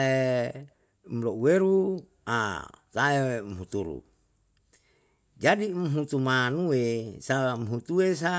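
No technical faults can be heard anywhere in this recording.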